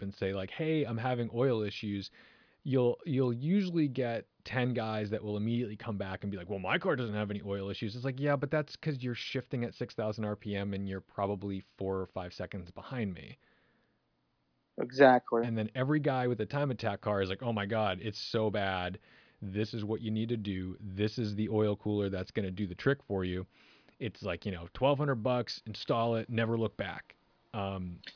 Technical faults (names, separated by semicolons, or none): none